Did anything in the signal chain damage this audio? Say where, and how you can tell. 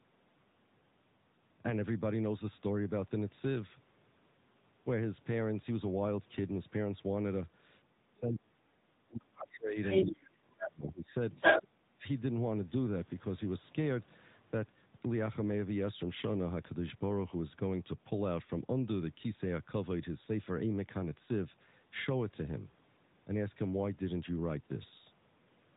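Yes. At the codec stage, the whole clip passed through the AMR narrowband mobile codec, AMR-NB at 10.2 kbps, one of the higher rates for this codec. Nothing above 3.8 kHz survives, so the speech has the boxed-in, telephone-band sound of a 2G or 3G call. Because the voice is rebuilt from a vocal tract model driven by a handful of pulses per frame, the voice has a plainly audible buzzy, synthetic edge throughout.

In call processing, the speech is pushed far down in three stretches: 7.89 to 9.77 s, 10.02 to 11.2 s and 11.63 to 12.03 s. At the deepest points it falls by roughly 35 to 40 dB, which is close to silence. The likely cause is an echo canceller that could not tell the local talker from the loudspeaker echo while both ends spoke, and so turned everything down. The result is speech suppressed in double talk.

In the same window, the other side's voice leaks through in short scraps at 9.39 to 9.46 s, 9.82 to 10.06 s, 10.58 to 10.69 s and 11.32 to 11.65 s. 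These bursts range from well below the talker's level to well above it. The residue likely comes from the echo canceller failing to remove the far-end voice picked up from the loudspeaker. That is why these fragments of a second voice interleave with the suppressed gaps.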